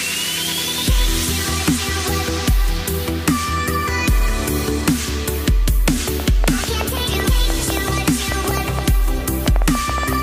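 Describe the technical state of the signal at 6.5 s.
At 6.5 s a train of clicks is under way, running from 6.08 to 10.14 s: around thirty same-shaped pulses at about 6.4 per second, unevenly spaced, peaking roughly 10 dB above the sound. They are likely interference or a faulty connection. Their repetition sets them apart from an isolated click.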